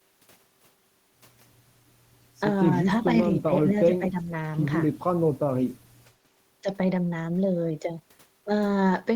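An echo canceller likely mistook overlapping talk for its own loudspeaker echo and turned the speech down. That speech suppressed in double talk shows as a deep dip, around 20 dB, from 3.34 to 3.53 s, then a shallower dip of roughly 10 dB from 3.71 to 4.33 s.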